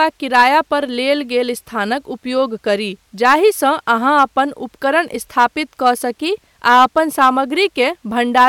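Crackle breaks over the speech peaks at 0.02–0.56 s, before "पर लेल", at 3.25–3.35 s after "स्थानक उपयोग करी", then at 3.91–4.39, 5.39–5.45, 5.86–5.90, 6.67–7.29 and 8.37–8.48 s. This is hard clipping. The signal runs about 2 to 5 dB past what a stage can pass, so the peaks are sliced flat and throw off high harmonics.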